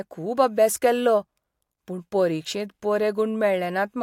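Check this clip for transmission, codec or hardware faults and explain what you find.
Nothing stood out on listening to this speech clip.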